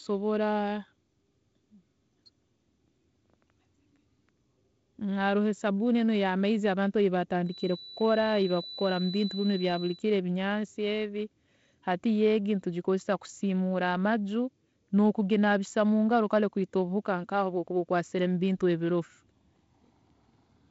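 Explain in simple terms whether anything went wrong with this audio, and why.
A thin, steady whistle around 4 kHz sits quietly under the speech from 7.42 to 10.05 s, between "enu eyamaizi abantu eyi" and "ebinyansi ebi". This is a feedback whistle, likely caused by loudspeaker sound looping back into the microphone and ringing.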